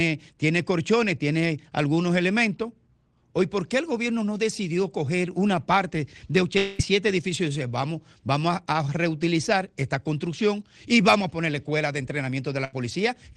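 From 6.57 to 6.81 s the sound smears into a fading buzz or hiss for about 0.21 s while roughly 0.22 s goes missing, likely a long network dropout, longer than a burst. At 12.65 to 12.75 s a burst of packet loss drops about 80 ms, heard as a brief held, fading tail before the audio jumps ahead.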